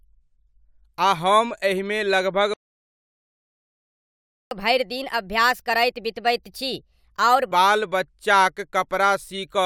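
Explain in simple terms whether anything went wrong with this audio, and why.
Playback stall from 2.54 to 4.51 s: the speech cuts out for about two seconds, likely because the player ran out of incoming data, then resumes.

Catch-up at higher speed from 4.51 to 7.51 s: the player plays at 1.25 times normal speed, raising the pitch roughly four semitones, to recover the lost time.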